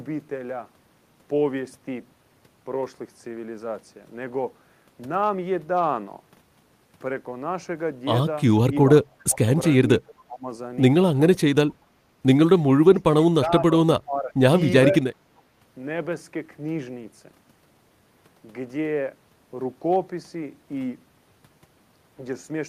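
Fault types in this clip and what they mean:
Speech suppressed in double talk: at 9.03–9.48, 9.86–10.47, 11.73–11.78, 12.83–13.18, 13.46–13.51, 14.0–14.35 and 14.89–14.95 s the speech briefly sinks, by roughly 30 dB at its deepest near 13 s and by about 5 to 10 dB in the shortest dips. The likely cause is an echo canceller that, with both ends talking at once, mistook the near talker for loudspeaker echo and attenuated it along with the echo.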